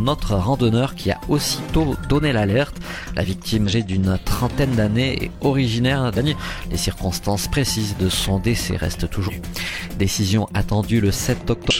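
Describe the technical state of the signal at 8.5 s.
At 8.5 s the signal is intact, with no technical fault present at that moment.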